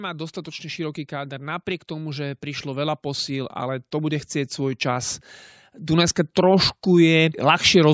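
From 0.10 s to 7.89 s the speech shows automatic gain rising: the gain control judged the input too quiet and kept turning it up, by about 14 dB in all, so voice and background noise swell together instead of the voice alone getting louder. On a waveform the envelope widens steadily across the clip, and a spectrogram brightens evenly at every frequency up to the 8 kHz ceiling left by the call's microphone processing.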